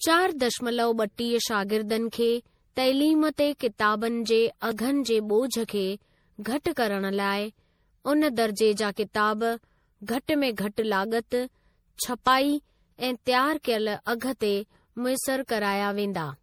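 Throughout, the speech sounds swirly, smeared and hollow, with blurred attacks. Generation loss is the likely cause, with several lossy re-encodes fitting MP3 near 64 kbit/s. At 4.71 s and 12.27 s, a sudden jump appears without any gap. Each is likely a dropped buffer (overrun), skipping roughly 10 ms, then about 20 ms.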